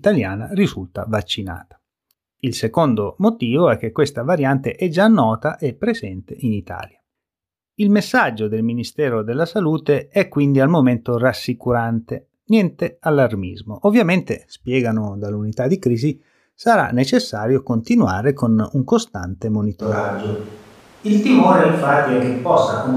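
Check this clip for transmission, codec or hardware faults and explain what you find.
One fault turns up near the end. From 19.8 s, right after "continuare con un costante", a switch to a distant microphone holds to the end: the speech suddenly turns roomy and hollow, thinner in the bass, at much the same loudness, with room noise roughly 30 dB below the speech. The likely cause is that the close microphone's feed dropped out, leaving a farther pickup that captures more reflections. On a spectrogram, low-frequency energy thins at that instant and gaps between syllables fill with noise; the waveform shows smeared word endings.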